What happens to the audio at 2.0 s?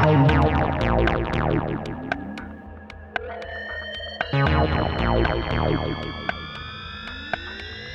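Nothing goes wrong at 2.0 s; the music plays through that moment intact, with no dropout, click or other fault.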